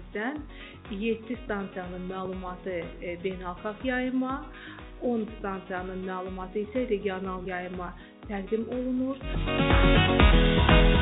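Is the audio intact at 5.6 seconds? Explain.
Yes, the audio is intact at 5.6 seconds, with nothing breaking up or dropping out there beyond the narrowband, telephone-like sound of the call path, which carries nothing above 4 kHz.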